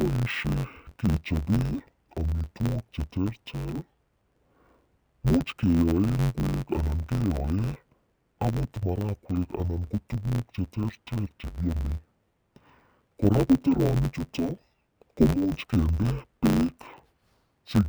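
Interleaved audio read as planar throughout: 10.88 ms blocks were split into halves, so the speech sounds dull and robotic, buzzing at about 92 Hz.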